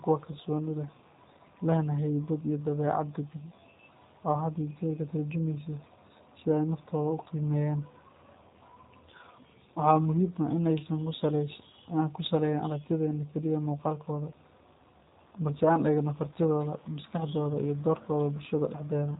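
Speech passing through a G.729 codec for its whole length, which fits an 8 kbit/s VoIP path. Rebuilding from filter, pitch and pulse parameters leaves it plainly rough and synthetic. A spectrogram shows a hard ceiling at 3.8 kHz, with blank space above it.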